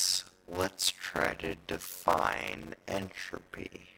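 A block size mismatch (padded) runs throughout: each short block, which fits 256 samples, is zero-filled to the reader's size, causing a 91.9 Hz buzz and playback slowed to 0.533 times speed at near-normal pitch.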